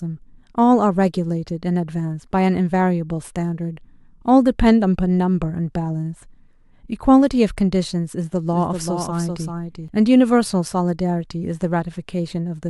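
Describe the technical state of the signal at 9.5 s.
At 9.5 s there's a doubled audio track (8.52–9.88 s): a dry copy of the speech trails by roughly 400 ms, a few dB quieter, likely from a slower second capture path.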